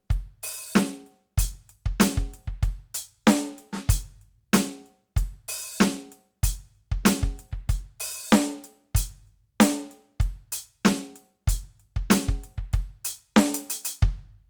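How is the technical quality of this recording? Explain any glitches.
No glitches or faults are audible in this music.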